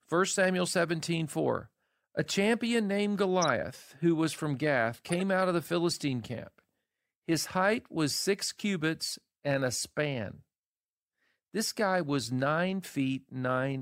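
At 3.42 to 3.47 s, a corrupt frame is decoded. Damaged bits gave wrong gains and codes, so energy lands at false frequencies. It spans roughly two frames. At 5.09 to 5.21 s a longer stretch of corrupt frames follows, likely several frames, peaking around -20 dBFS.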